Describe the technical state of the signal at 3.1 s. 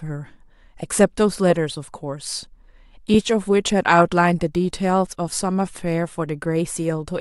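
At 3.14 s the speech has lost LE Audio frames. The gap lasts about 10 ms, which fits a single lost frame. The LC3 decoder fills it by repeating the previous spectrum with randomised signs. The result is a brief noisy smear in place of the speech.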